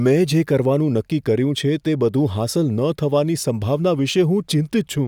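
Listening to the speech here, nothing technical stood out as wrong at any point.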